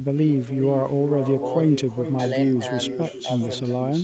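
From start to finish the speech carries an echo with no canceller: every phrase returns roughly 400 ms later as a fainter copy, about 11 dB down, thinner than the original. The far end is evidently playing the call over a loudspeaker into its own microphone, and nothing removes that path. Unlike room reverberation, which smears continuously into a tail, this is one distinct, delayed repeat, and it sits inside the call band's 8 kHz top.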